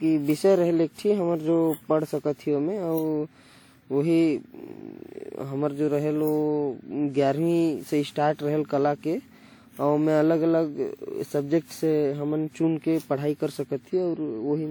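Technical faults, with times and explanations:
Throughout, generation loss: swirly, hollow, smeared speech with blurred onsets, likely about ten WMA passes near 96 kbit/s; spectrogram shows nothing above 20.1 kHz.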